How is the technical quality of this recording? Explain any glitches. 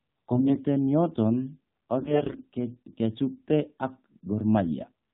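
The recording is poor: the whole clip passed through a narrowband mobile speech codec, and two short stretches carry corrupted frames.

Throughout, the AMR narrowband mobile codec squeezed the speech through an 8 kHz vocal-tract model driven by a few pulses per frame. The buzzy, synthetic quality points to a low bitrate, around 7.4 kbps, and nothing above 4 kHz survives, so the speech sounds dull and boxy.

From 0.32 to 0.57 s and again from 1.98 to 2.42 s, AMR bit errors flipped the weaker-protected bits, roughly one in ten, while the frames were still accepted. Misplaced excitation pulses and skewed pitch and spectrum values make the speech hoarse, scratchy and gargly, though pitch and loudness roughly hold.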